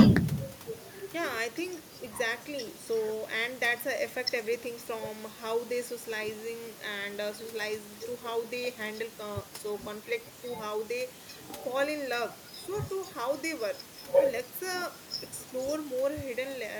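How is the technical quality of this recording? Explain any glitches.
Nothing here counts as a glitch, just a bit of room noise sitting about 17 dB under the speech, which comes from the space the microphone was in rather than from the recording system.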